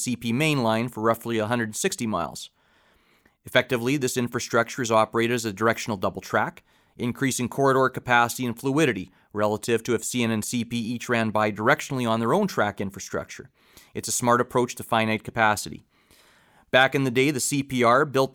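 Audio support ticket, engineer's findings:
No fault found on listening; nothing to report.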